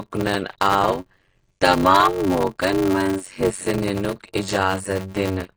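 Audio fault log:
throughout, AAC compression: The speech sounds plainly dull and smeared, with a fizzy, warbling edge on sibilants. This is likely lossy AAC-LC coding at a low bitrate, around 24 kbps, which drops the top band and coarsely quantises the rest.
throughout, block size mismatch (padded): A steady 93.8 Hz buzz runs under the speech, which plays at 0.625 times normal speed with pitch roughly unchanged. Each block read is only partly filled and topped up with silence. This fits 512-sample reads receiving about 320 samples each.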